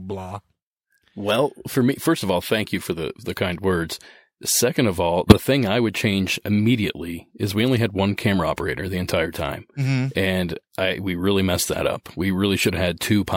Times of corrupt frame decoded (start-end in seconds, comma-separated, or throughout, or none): 5.29-5.40, 7.07, 12.59-12.70